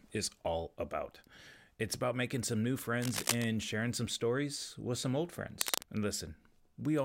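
A worn cable or connector was likely being moved, its contact resistance jumping about and injecting cable scratch noise into the speech. The first burst runs from 3.00 to 3.45 s, right after "about making some new" and before "sharing some stories with"; the second spans 5.61 to 5.83 s, following "stories with some old". Each time, dense, ragged scratching sits on top of the speech at roughly the same loudness, briefly rustling over it.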